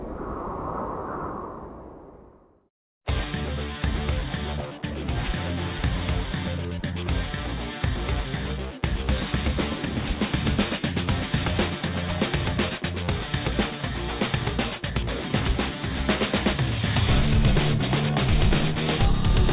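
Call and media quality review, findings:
Aliasing throughout: gritty, metallic highs folding back below 4 kHz, fairly strong. Likely an unfiltered downsample to 8 kHz. Unlike plain band-limiting, which only dulls, this adds wrong, unrelated pitches.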